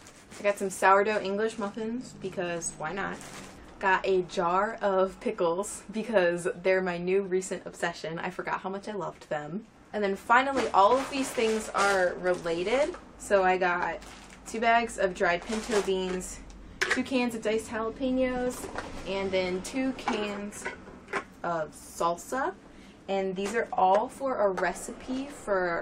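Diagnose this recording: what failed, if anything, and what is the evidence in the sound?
Nothing in the recording points to a failure at any stage of the chain. No event stands out that would call for a diagnosis.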